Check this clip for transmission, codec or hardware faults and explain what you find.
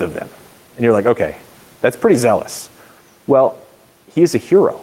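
One fault runs through this speech recording.

Gain pumping is present throughout. The input gain is likely set far too high, so a fast limiter clamps down on every loud sound. The room noise sits about 39 dB below the speech, and the gain swings by around 5 dB, leaving the speech flattened and squashed.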